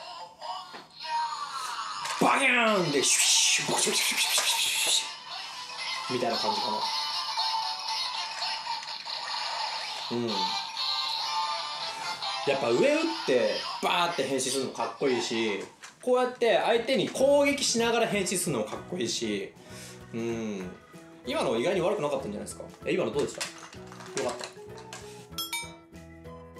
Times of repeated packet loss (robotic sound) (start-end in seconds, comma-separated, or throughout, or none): none